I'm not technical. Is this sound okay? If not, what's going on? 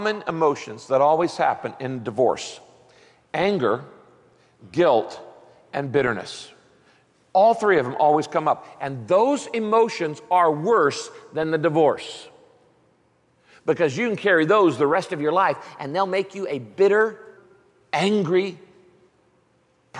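No. A wrong sample rate fault runs from 14.95 to 17.37 s. The sound plays about 1.09 times too fast and sits about 1.5 semitones higher, because speed and pitch rise together. That fits audio made at 22 kHz being played as 24 kHz.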